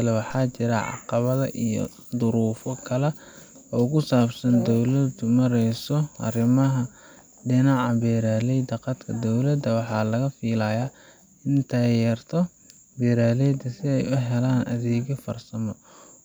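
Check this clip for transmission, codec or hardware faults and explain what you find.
One hardware fault is present. At 0.30 s a DC step, about -33 dBFS, suddenly shifts the waveform's zero line, then drains away through a roughly 2 Hz high-pass, producing a single low thump or click.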